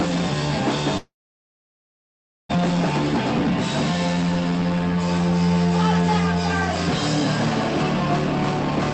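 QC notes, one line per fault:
0.97–2.51 s, long network dropout: the sound breaks off at 0.97 s and is replaced by a decaying buzzy continuation of the last moment, which thins within about a tenth of a second into near-silence lasting roughly 1.4 s. Audio resumes at 2.51 s with about 1.5 s simply absent. The likely cause is a packet stall on the call link, with the receiver concealing and then muting the gap. The surrounding audio is band-limited near 8 kHz, consistent with Opus at about 32 kbps.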